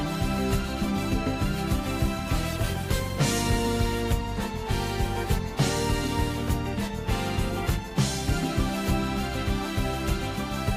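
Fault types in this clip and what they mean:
No faults can be heard.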